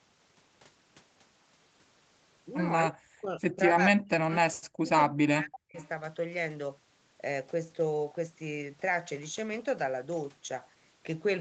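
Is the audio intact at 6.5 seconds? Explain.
Yes, the audio at 6.5 seconds is intact, with no fault at that moment.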